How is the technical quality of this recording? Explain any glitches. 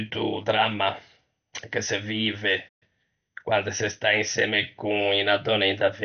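The technical quality is poor: the speech is band-limited and plainly audible coding damage runs through the whole clip, and there is a dropout followed by a hurried passage near the three-second mark.

Throughout, the sound is dull, gurgling and granular. This is likely MP2 compression: Layer II splits the signal into 32 sub-bands and, starved of bits, switches off the upper ones and coarsely quantises the rest. The damage fits a low rate of around 48 kbps.

From 2.68 s to 2.83 s the speech cuts out mid-flow for roughly 125 ms of silence, then resumes. The likely cause is a playback stall, where the player ran out of data or was blocked and output nothing until it recovered.

From 2.83 s to 3.31 s, on "quande se sta insemme", the speech runs at 1.25 times normal speed without any pitch change. This is time-compressed catch-up: the player clears its backlog by dropping short segments and cross-fading across the joins.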